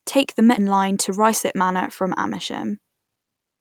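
At 0.57 to 0.59 s a skip ahead drops roughly 0.7 s of speech with no fill; the waveform splices straight across, and the spectrogram shows an abrupt formant discontinuity. From 0.67 to 2.25 s a jitter buffer speed-up trims pitch periods, about a tenth of a second in total, so speech runs 107% fast at unchanged pitch; spectrogram harmonics stay level while syllables compress.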